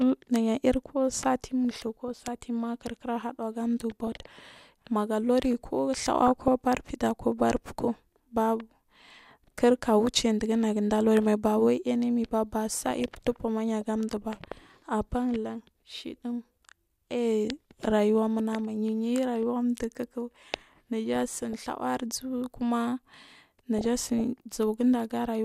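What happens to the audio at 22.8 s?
Nothing goes wrong at 22.8 s; the speech there plays through cleanly, with no fault at that moment.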